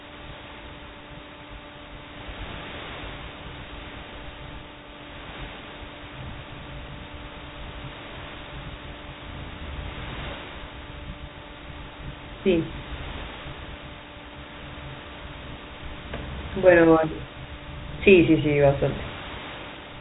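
No technical faults can be heard in this speech.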